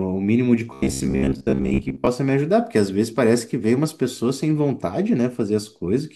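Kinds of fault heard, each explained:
Robotic sound from repeated short buffers: audio likely stopped arriving on time, so playback kept looping a fragment of about 15 ms in place of the skipped material for most of 0.73 to 2.07 s, imposing a rigid 66.7 Hz metallic buzz that loosely tracks the speech.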